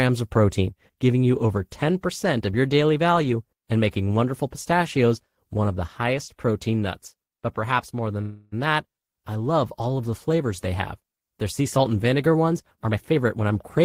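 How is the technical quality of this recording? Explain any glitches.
Two glitches mar the call audio. At 8.21–8.54 s, after "perhaps more", a call audio freeze stretches the last sound into a fading buzz before "that I love all" resumes intact. This is likely from delayed packets draining the jitter buffer, and unlike a dropout it loses nothing. At 12.75–13.80 s, after "salt and vinegar ones", a jitter buffer speed-up trims repeated pitch periods, about a fifth of a second in total, so the speech runs 118% fast and hurried but keeps its pitch, unlike a tape-style speed change.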